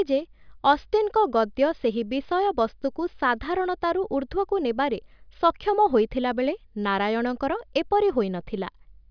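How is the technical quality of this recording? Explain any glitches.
No technical faults are audible.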